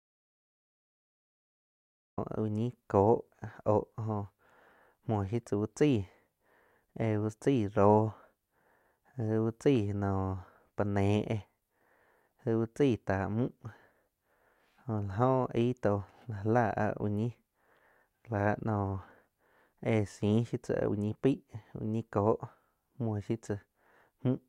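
Speech opening with an audio dropout to silence: the input was likely lost, so silence runs from the start to 2.18 s before the sound cuts in mid-flow.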